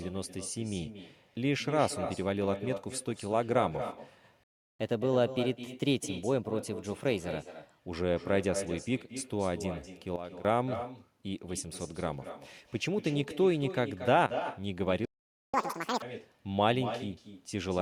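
With no echo canceller on the far end, the talker's own voice returns from a loudspeaker and microphone throughout the speech, about 200 ms late and about 10 dB below it, so every phrase is trailed by a quieter, thinner copy.

At 4.43 s the output goes silent for 0.36 s, most likely a playback stall where the player ran dry of data or its thread was held up. Sound resumes at 4.80 s, but the gap breaks the phrase audibly in mid-flow.

From 4.80 s to 7.80 s the player works off its backlog with catch-up at higher speed, resampling at 1.1 times normal. The speech runs noticeably quicker and a little over a semitone sharp, then settles back to normal pace and pitch.

At 10.16 s a sudden gain jump drops the level by about 12 dB, probably a digital gain change applied without a ramp. Voice and background fall together and stay down until 10.45 s. At 14.26 s a second jump cuts the level by about 13 dB, this time only until 14.37 s.

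A second playback stall follows at 15.05 s, again likely a starved or blocked player, and leaves 0.48 s of silence. At 15.54 s a second catch-up at higher speed runs until 16.02 s at double speed. That short burst sounds hurried and squeaky, raised by about 10 semitones.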